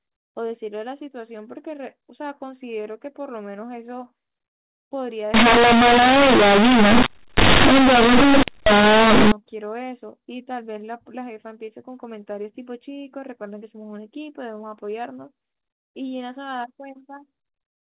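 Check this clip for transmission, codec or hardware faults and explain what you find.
One fault is present, in the middle of this speech clip. The surrounding audio has the narrow band of G.711 mu-law telephone coding, with nothing above 4 kHz. From 5.34 to 9.32 s there is companded audio read as linear. The mu-law bytes are played straight as linear 8-bit samples, with no expansion step. Every sign change throws the output across half its range. Quiet passages come out as loud as peaks. The result is harsh, very loud, buzzy distortion, with heavy noise filling the pauses.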